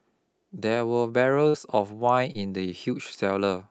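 At 1.49 to 1.56 s, then at 2.33 to 2.36 s, the speech shows short concealed packet loss. About 40 ms and then 20 ms of audio failed to arrive in time, and the decoder covered each gap by extending the preceding sound, pitched or as shaped noise, before crossfading back to received audio. Each is heard as a brief smear or wobble in the speech, the first longer.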